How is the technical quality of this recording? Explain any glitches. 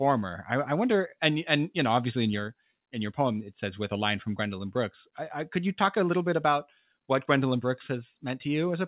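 No glitches can be heard in this recording. The speech comes through a call path whose band stops at about 4 kHz, which fits a narrowband telephone codec such as G.711 mu-law.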